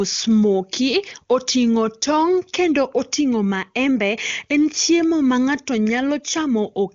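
The speech carries no technical fault: it comes through an AMR wideband (HD Voice) path with energy stopping at about 7.4 kHz, and its clarity fits one of the codec's higher rates, around 23.85 kbit/s.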